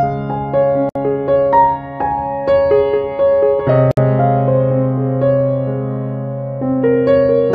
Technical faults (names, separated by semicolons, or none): gap at a join of encoded pieces